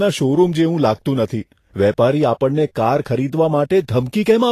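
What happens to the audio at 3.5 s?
At 3.5 s the speech carries Vorbis compression, present across the whole clip. The treble sounds hissy and grainy and consonant attacks smear, likely from coarse treble quantisation at a rate near 35 kbps. A spectrogram shows nothing above 14.2 kHz, with speckled upper bands.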